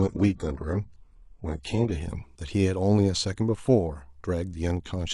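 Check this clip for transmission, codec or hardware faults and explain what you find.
One fault stands out, at the very start. An adaptive stream starting at a low bitrate affects 0.0 to 2.0 s. The player opened on a cheap rendition so playback could begin immediately, then switched to a richer one once it had gauged the connection. For those first two seconds the speech has thin, partly synthetic treble and heavier codec smearing, consistent with HE-AAC near 12 kbit/s. At 2.0 s the sound abruptly opens up, without a gap, to something resembling AAC-LC around 96 kbit/s.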